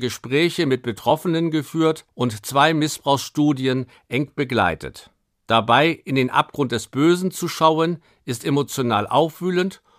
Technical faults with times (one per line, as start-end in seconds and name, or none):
none